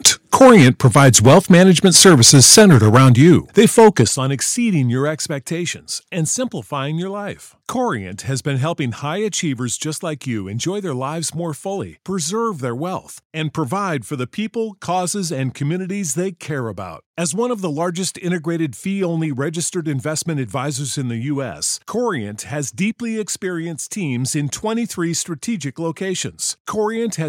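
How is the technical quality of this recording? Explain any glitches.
The recording has two related faults at the start: heavy distortion for the first four seconds, and a series of abrupt level drops.

From 0.05 to 4.03 s, ending just before "on exceeding your", the speech is harshly distorted with a crackling edge on the loudest syllables. This is likely microphone overload. The input was driven about 9 dB past the converter's limit, flattening the waveform tops on around 7 percent of samples.

The microphone volume stepped down four times, at 0.08 s (about 3 dB), 3.09 s (about 4 dB), 4.08 s (about 10 dB, just before "on exceeding your") and 5.1 s (about 2 dB, right after that phrase). Each time, speech and background drop together in a single step, likely from the call software's automatic gain control reacting to the clipping.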